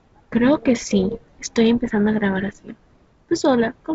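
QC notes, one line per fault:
Nothing stood out on listening to this speech, which comes through G.722 wideband telephone coding at 64 kbit/s with nothing above about 7.7 kHz.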